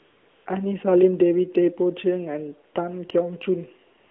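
From 0.0 to 0.46 s and again from 3.98 s to the end at 4.11 s, the background becomes a steady, smooth hiss. This is AMR comfort noise: the sender judged these stretches silent and stopped sending speech frames, so the receiver filled the gaps with synthetic noise. That fill sits inside the narrow 300 Hz to 3.5 kHz band of the AMR-NB link, which runs at 12.2 kbps.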